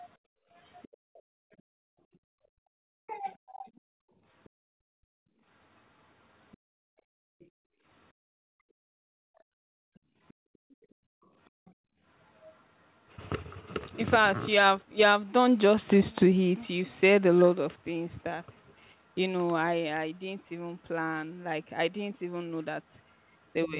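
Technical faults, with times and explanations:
0.18–2.20 s and 3.93–12.02 s, background gated by the echo canceller: the room sound around the talker sinks by about 40 dB and then about 36 dB, for roughly a second and a half and then roughly five seconds in all. The canceller clamps the microphone hard whenever the loudspeaker plays and releases it afterwards.
0.82–1.22 s, 3.67–4.49 s, 6.52–8.13 s and 10.28–12.56 s, other side's voice leaking through: a faint second voice, around 30 to 35 dB below the talker, comes through in short stretches. This is likely residual loudspeaker echo that the canceller failed to subtract from the microphone signal.
2.48–3.65 s and 23.65–23.79 s, speech suppressed in double talk: the talker's own voice dips in pieces, by about 40 dB over roughly 0.4 s in the first span and about 15 dB for roughly 0.15 s in the second. This is likely the canceller attenuating everything while both sides speak at once.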